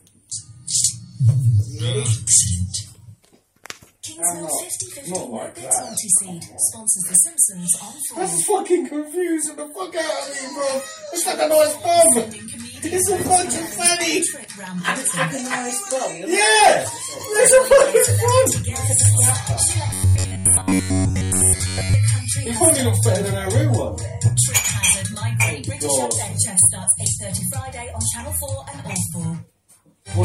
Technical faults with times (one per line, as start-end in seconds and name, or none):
19.89-21.94 robotic sound from repeated short buffers